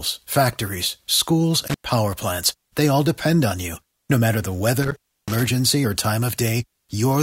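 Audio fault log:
1.68–1.91 s and 4.83–5.47 s, intermittent contact: a loose cable or plug briefly lost its connection, opening the signal path for 100 ms in the first event and about 260 ms in the second. While the line is broken the speech drops out and only faint hiss remains. Each make and break of the contact adds crackle at the edges of the gap, so each dropout is framed by rough, scratchy transients.
5.84 s, overlap between stream segments: two consecutive stream segments, which points to segments about 2 s long, carried overlapping timestamps. The player trimmed the overlap from audio that was not actually duplicated, deleting a few milliseconds of real signal. The waveform jumps across the cut, producing a click or tiny skip at that moment.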